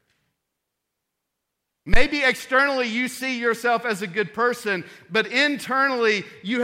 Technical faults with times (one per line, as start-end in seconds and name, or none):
1.94-2.03 phantom power thump